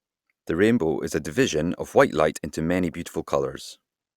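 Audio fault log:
No faults can be heard anywhere in the speech.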